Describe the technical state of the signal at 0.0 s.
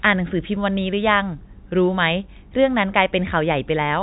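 At 0.0 s the speech is intact, with no fault at that moment; it comes through the ordinary G.711 telephone band, with nothing above about 3.8 kHz and at most a faint trace of coding noise.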